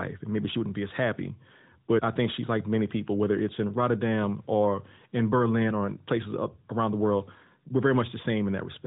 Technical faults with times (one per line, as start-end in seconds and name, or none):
none